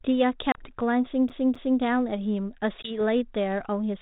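At 0.52 s the speech drops into a hard-edged hole of about 30 ms, packet loss on an ADPCM call, roughly a few packets' worth. The decoder's adaptive predictor and step size lose track of the sender's, so the speech comes back slightly distorted, settling by 0.62 s. From 1.29 s to 1.80 s the audio behaves like a CD stuck on one turn: a 0.26 s segment plays twice over, with a short mute at each jump back. The result is the quick, regular stutter of a skipping disc. At 2.82 s a second ADPCM packet loss leaves a gap of about 20 ms, probably a couple of packets. The decoder state again recovers over the following tens of milliseconds, through 2.97 s. Underneath all of this, the 32 kbit/s G.726 coding adds only light coding damage.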